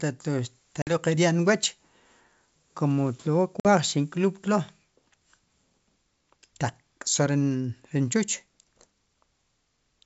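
At 0.82 s and 3.60 s, packet loss on an ADPCM call leaves 50 ms hard-edged silences, then slightly distorted speech while the decoder's predictor resynchronises.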